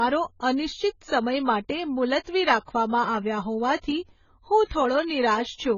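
Throughout, the speech sounds dull and smeared, with nothing above 7 kHz. Sibilants fizz and sustained sounds warble. This is likely AAC compression at a very low bitrate, around 16 kbps, where the codec strips high frequencies and leaves coarse spectral holes.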